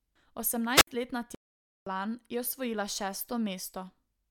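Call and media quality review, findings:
Wireless microphone squelch dropout, 0.75 to 0.87 s. Brief hiss rise, then a near-silent hole of about 63 ms before speech returns. RF link fade; receiver squelch muted output. Spectrogram: broadband noise smear, then a blank vertical gap. Waveform: short flat segment.

Playback stall, 1.35 to 1.87 s. Speech stops mid-flow for about 517 ms, resuming at "je osvojila". Likely player buffer underrun or blocked audio thread. Waveform: clean flatline. Spectrogram: empty column, hard edges both sides.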